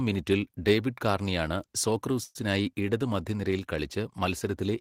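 From 2.23 to 2.37 s the speech stalls into a fading buzz that drops to near silence for its last 10 ms before resuming at "ഇടത് മധ്യനിരയിൽ". This call audio freeze is likely late packets emptying the jitter buffer, inserting a 116 ms gap while losing nothing.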